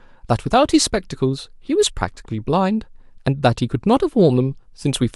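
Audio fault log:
0.70–0.72 s: corrupt frame decoded. A brief chirp-like blip cuts into the speech for about 20 ms, peaking somewhere around -25 dBFS. Its length matches a single compressed frame that arrived with flipped bits and was decoded without being concealed. The damaged gain values and misread spectral codes put energy in the wrong frequency bands for that frame, so a short, unnatural burst replaces the speech before decoding returns to normal on the next frame.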